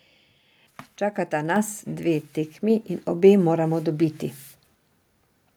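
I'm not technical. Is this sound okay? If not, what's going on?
No. There are two moments of microphone volume stepped up, at 1.56 s and again at 2.7 s, just before "in obe moramo dobiti". Each time the calling software turned the microphone up in one jump. Unlike someone leaning closer, the background gets louder along with the voice.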